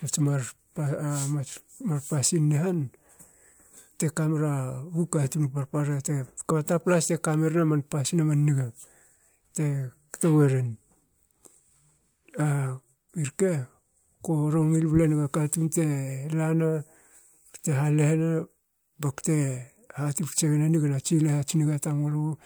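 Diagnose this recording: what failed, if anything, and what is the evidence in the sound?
Nothing in the speech points to a failure at any stage of the signal chain. No event stands out that would need diagnosing.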